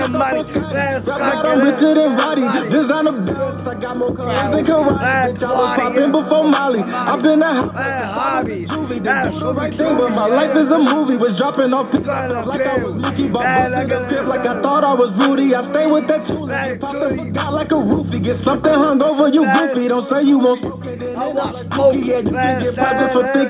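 Nothing in this audio stands out as a technical fault; there's no dropout, glitch or distortion to point to at any moment.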